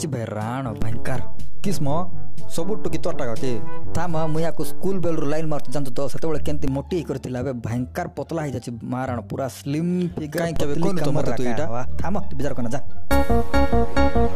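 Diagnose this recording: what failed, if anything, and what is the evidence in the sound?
A converter-side DC step: low thumps at 0.82 and 6.68 s as an offset of about -14 dBFS comes and goes, then about -16 dBFS from 10.56 s onward.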